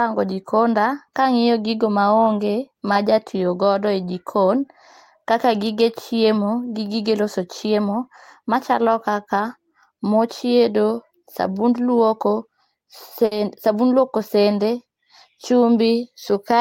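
At 13.25 s the speech briefly turns into the last sound held and fading for about 60 ms. This is a burst of packet loss: the receiver stretched the last sound over the gap and picked up again at 13.33 s, with about 60 ms missing.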